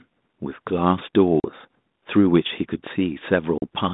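Speech with two hard-edged silent gaps, at 1.4 to 1.51 s and 3.58 to 3.63 s, is packet loss on an ADPCM call: about 40 ms of audio is dropped each time, and the decoder's predictor falls briefly out of step.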